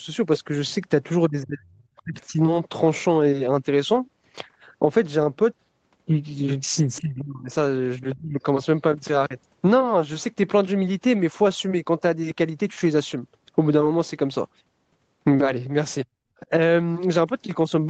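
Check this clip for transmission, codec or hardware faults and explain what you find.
Two kinds of fault turn up in the speech, both from the call's echo handling, over audio that tops out around 8 kHz as you'd expect from a wideband Opus call.

Speech suppressed in double talk: the voice sinks at 1.29–2.4 s, 7.0–7.51 s, 8.14–8.41 s and 16.41–16.52 s, by up to about 35 dB, only about 10 dB on the last. The likely cause is the echo canceller mistaking the talker for loudspeaker echo while both sides spoke, and ducking everything.

Other side's voice leaking through: a brief scrap of a second voice shows up at 1.96–2.02 s, roughly 35 dB below the talker, right inside that first dip. Some far-end audio from the loudspeaker likely slipped past the echo canceller into the microphone signal.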